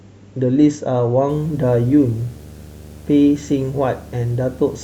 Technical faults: video or display buzz

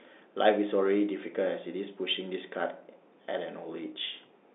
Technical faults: none

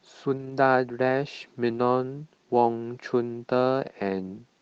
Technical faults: lost packet rebuilt from error correction

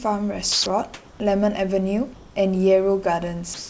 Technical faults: sound dropped by the voice detector; comfort noise in place of the background

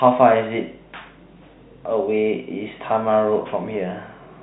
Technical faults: none

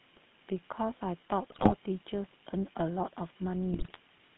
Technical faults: GSM full-rate codec; GSM bit errors

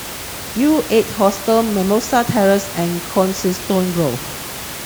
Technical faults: none

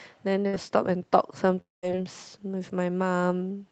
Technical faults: burst of packet loss; long network dropout

